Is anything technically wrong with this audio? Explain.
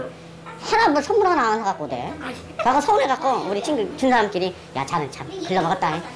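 Yes. Throughout the clip there is a wrong sample rate fault. The audio runs about 1.38 times too fast, and its pitch is raised by about 5.6 semitones. That fits material recorded at 16 kHz being played back at 22 kHz with no conversion, so speed and pitch shift together and everything sounds hurried and high. On a spectrogram, all content sits proportionally higher and the top band edge near 8 kHz moves up to about 11 kHz. On the waveform, events look compressed in time.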